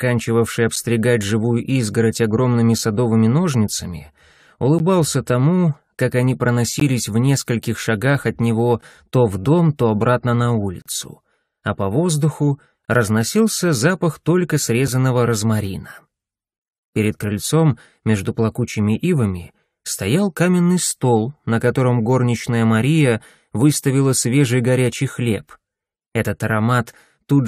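Short, hard-edged holes of silence cut into the sound at 0.76, 2.78, 4.79, 6.80 and 8.81 s, then longer ones from 10.82 to 10.86 s and 12.85 to 12.88 s. These are gaps between stream segments: their timestamps don't meet, the player pads silence, and the two-second spacing points to two-second segments.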